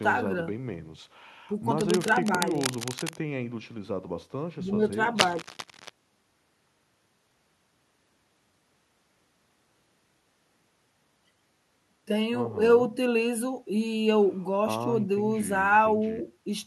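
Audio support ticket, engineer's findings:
Cable scratch noise, 1.80–3.17 s: dense, irregular crackle sitting a few dB under the speech. 5.18–5.90 s: same scratching, roughly as loud as the speech. Likely a worn cable or connector being moved, contact resistance fluctuating rapidly. Spectrogram shows ragged broadband vertical streaks; waveform shows uneven bursts of spiky hash over the speech envelope.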